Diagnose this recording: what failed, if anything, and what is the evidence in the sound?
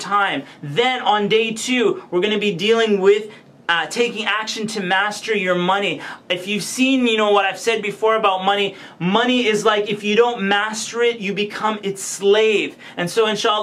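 No fault is audible.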